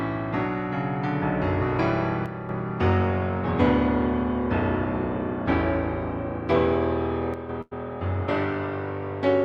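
At 2.26 s the level suddenly sags by about 6 dB until 2.49 s, and again from 7.34 to 7.49 s. That's one channel dropping out. Likely one stereo side went missing briefly, so the mono sum loses half its shared content. Right after, at 7.61 s, there's a burst of packet loss lasting to 7.73 s. The receiver stretches the last bit of sound for about 100 ms as a fading buzz or hiss, then jumps ahead, skipping roughly 100 ms of audio.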